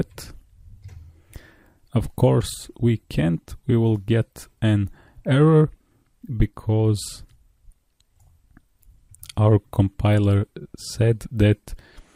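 Nothing technically wrong turns up anywhere in this audio; it just runs along without a single glitch worth pointing out.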